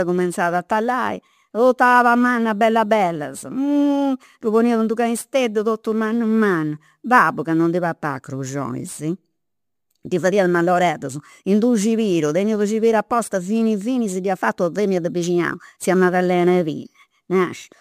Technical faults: crude rate conversion

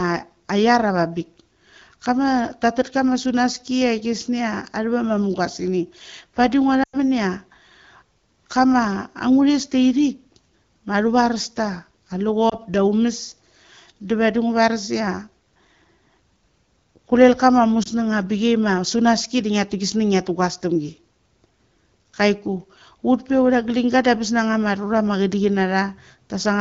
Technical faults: lost AMR speech frames

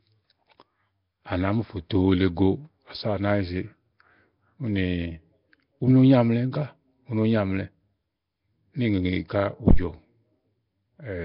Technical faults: Nellymoser compression; phantom power thump

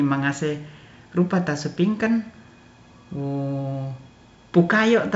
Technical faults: none

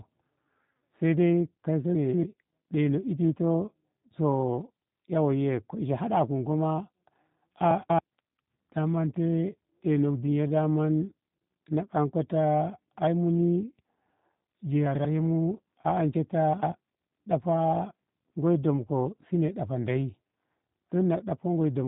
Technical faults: G.729 codec; chunks out of order

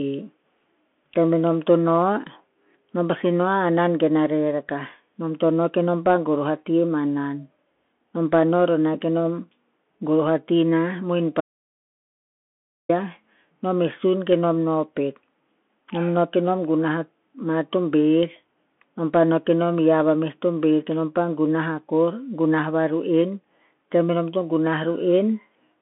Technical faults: Bluetooth CVSD headset codec; audio dropout to silence

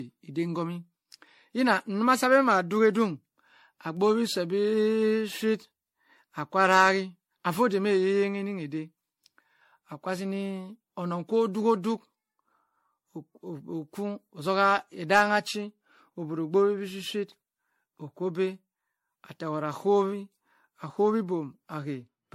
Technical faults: generation loss

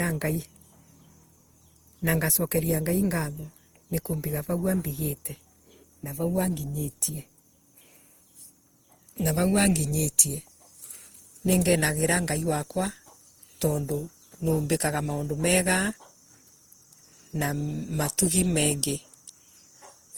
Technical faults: generation loss

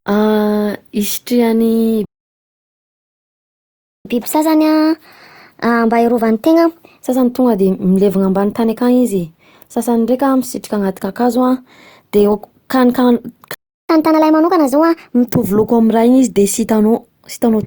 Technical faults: playback stall; catch-up at higher speed

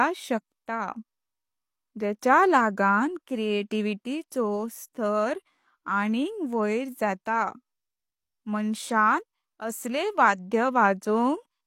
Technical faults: pre-echo

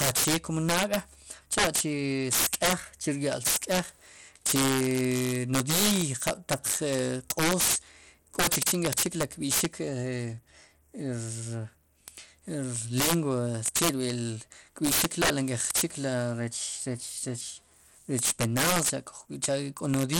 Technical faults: integer overflow; Bluetooth SBC compression

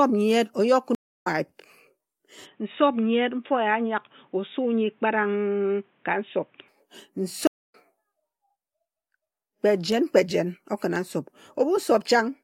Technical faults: stream reconnect; input switched to a poorer device

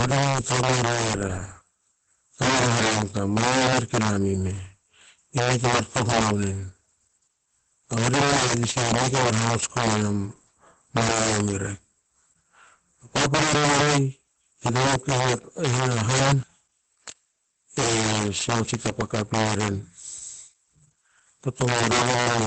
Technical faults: integer overflow; Opus voice compression

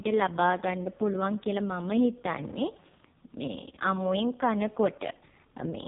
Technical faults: AMR narrowband mobile codec

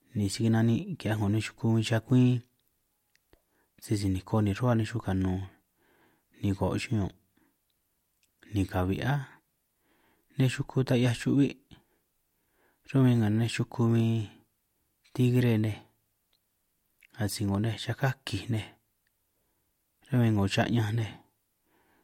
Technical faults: overlapping chunks

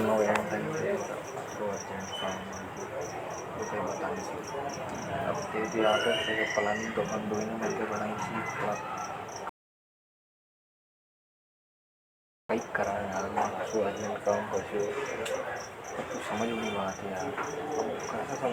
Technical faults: rebuffering stall

